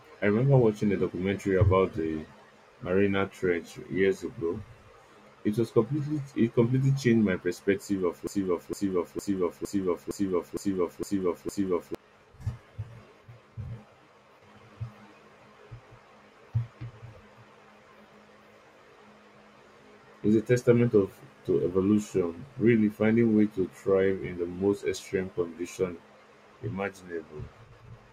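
A broken-record loop runs from 8.27 to 11.95 s: a 0.46 s fragment repeats eight times, likely from a stalled stream, so that speech is lost.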